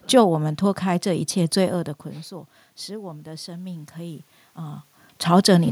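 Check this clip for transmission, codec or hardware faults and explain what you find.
One fault is present. From 2.96 to 4.9 s, automatic gain rising: after an input drop of about 16 dB, gain climbs about 4 dB, swelling speech and room noise together.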